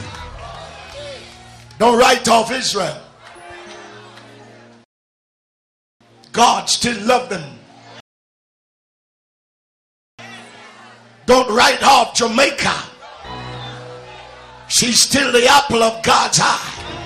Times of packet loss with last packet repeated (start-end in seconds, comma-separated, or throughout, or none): none